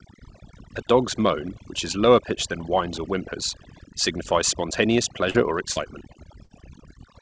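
Throughout the speech, overdone noise removal pulls individual frequency bands down near the noise estimate, leaving near-silent gaps with twinkling specks. Short concealed packet loss occurs at 5.30–5.36 s and 5.72–5.78 s. Each time about 40 ms of audio never arrived, and the receiver extended the previous sound, producing a brief smear or wobble. At 6.44–6.52 s a burst of packet loss drops about 60 ms. The last sound is held as a fading buzz or hiss, then the speech resumes further on. Nothing reaches above 8 kHz, consistent with a wideband call codec.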